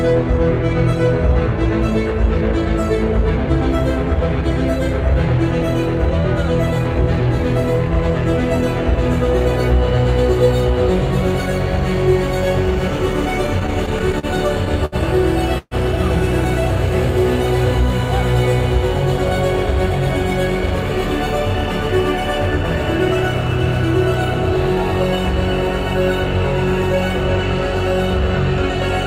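Packets repeatedly reached the jitter buffer too late between 13.47 and 14.26 s, producing repeated stalls (stutter): seven gaps, the longest 40 ms, were filled by continuing the previous sound, about 102 ms in all. The audio drags and stutters, though nothing is lost. At 14.85 s a single late packet caused a short stall: the buffer ran dry and the last sound was held for about 67 ms before playback resumed where it left off. From 15.58 to 15.74 s a call audio freeze, likely caused by packets held up in transit, stretches the last sound and then fades it to silence for 40 ms, inserting about 132 ms of extra time while no audio is missing.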